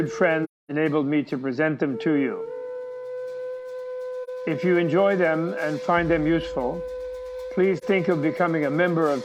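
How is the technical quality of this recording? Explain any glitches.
The audio has three short silent gaps from AAC frame loss with muting, at 0.44–0.71 s, 4.23–4.29 s and 7.77–7.84 s. Lost frames were zeroed, and the overlapping windows fade the sound out and in. Hard dropouts would click. The first gap, about 256 ms, fits six lost frames.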